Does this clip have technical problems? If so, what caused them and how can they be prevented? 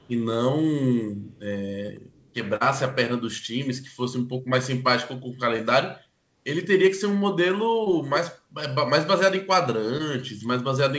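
Yes. Faint echo leak appears at 0.0 to 0.15 s, 1.32 to 1.4 s and 2.11 to 2.33 s. A copy of the speech returns about 240 ms late, roughly 35 to 40 dB down. The likely cause is a loudspeaker on the far end whose echo canceller let some of its microphone pickup through. Using a headset or tuning the echo canceller would prevent it.

Short concealed packet loss occurs at 1.86 to 1.90 s, 2.56 to 2.62 s, 5.56 to 5.60 s, 7.84 to 7.88 s and 9.98 to 10.01 s. About 20 ms of audio went missing each time, and 40 ms at 2.56 s. The receiver patched each hole by extending the previous sound, leaving brief smears or wobbles. A steadier network or a deeper jitter buffer would prevent it.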